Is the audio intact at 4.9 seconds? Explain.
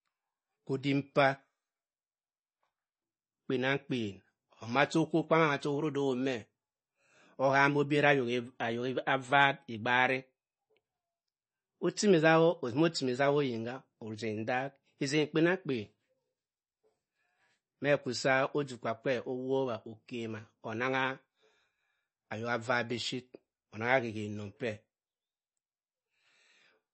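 No. At 4.9 seconds, as across the whole clip, the speech sounds watery and swirly, s sounds carry a metallic chirp, consonant attacks are smeared, and nothing is present above 8.3 kHz. This is likely MP3 compression at a low bitrate, around 32 kbps. Short of bits, the encoder cuts the treble at a fixed point and drops weak frequency lines, which then flicker on and off from frame to frame and produce that swirl.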